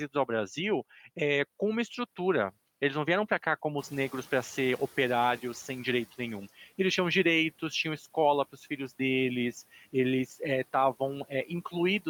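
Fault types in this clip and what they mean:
Noise suppressor catching up: when the room noise jumps by about 12 dB near 4 s, the suppressor's noise estimate lags, so the louder background leaks through and only sinks by about 10 dB over roughly 2.3 s. The speech stays whole; it is the background that lingers.
Speech cut by the noise suppressor: at 6.57, 7.98, 8.52 and 9.72 s the suppressor mistakes bits of speech for noise and pulls them down by about 7 to 12 dB, each for a brief fraction of a second. Here the speech itself sounds swallowed, not the background.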